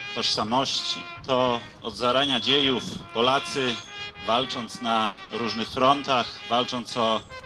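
At 5.05 s, a burst of packet loss drops about 120 ms. The last sound is stretched and faded, then playback jumps ahead. A second 60 ms burst follows at 5.23 s.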